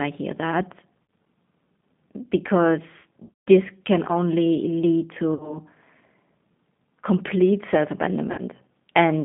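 Throughout the clip the speech passes through the G.729 codec, here the G.729A variant at 8 kbit/s. It rebuilds each 10 ms frame from a vocal tract filter, a pitch predictor and a few pulses, so the damage is plainly audible: a rough, slightly synthetic texture. On a spectrogram, energy sits in a band of roughly 150 Hz to 3.6 kHz, with nothing above, and harmonics look smeared rather than cleanly striated.

VoIP packet loss concealed by the speech codec first occurs at 1.06 s. About 60 ms of audio is missing, which fits two lost packets. The decoder stretches its last pitch and filter into a buzzy tone or coloured noise that weakens. At 3.23 to 3.48 s, just before "this can only lead", about 210 ms is lost across 240 ms, with the longest run 150 ms. This produces stretched, fading sound. Two further losses of about 60 ms each follow: one at 5.34 to 5.58 s, after "this can only lead", and one at 8.32 to 8.41 s, after "complete self". 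Each leaves the sound thin and distorted for a while after packets return.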